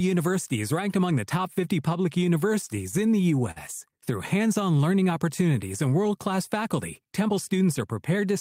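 Between 2.61 and 3.58 s the speech catches and drags in a series of small hitches, a repeated stall or stutter. Seven brief holds, the longest 49 ms, add up to 107 ms of stretched sound, about 11 percent of that stretch, with nothing actually lost. Packets were reaching the receiver late, so its jitter buffer kept running dry. Each time it bridged the wait by continuing the last sound until fresh audio arrived.

From 7.04 to 7.36 s the speech briefly sounds rushed while its pitch stays unchanged. This is a jitter buffer speed-up, playing at about 109 percent of normal rate. Delayed packets had arrived in a bunch and left more audio queued than the buffer's target. To bring the delay back down, the receiver cut short pitch-period-sized slices out of the signal several times in a row, trimming away roughly 40 ms in total.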